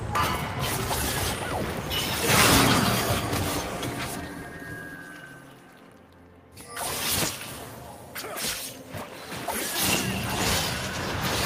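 Nothing here stands out as a technical problem; the audio just runs along without any glitch worth pointing to.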